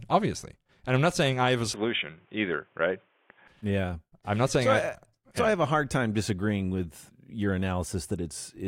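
From 1.74 to 3.47 s, the input was likely switched to a poorer device, one passing nothing above 3.6 kHz. The speech turns dull and boxy, with a faint new noise floor and a small level shift, then clears again without any gap.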